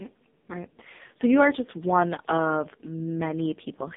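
AMR narrowband mobile codec damage runs throughout: the line passes only about 200 Hz to 3.7 kHz, and heavy coding leaves the voice buzzy and synthetic, with the vocal-tract model starved of pulses, which fits the lowest 4.75 kbps mode.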